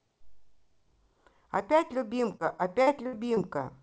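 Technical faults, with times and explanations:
2.32 to 3.38 s, repeated packet loss (robotic sound): six short gaps, up to 60 ms, are patched by stretching the preceding sound, giving choppy sound with pieces missing. On a spectrogram, frozen repeated harmonic bands below the 8 kHz ceiling; the waveform shows repeats and dips.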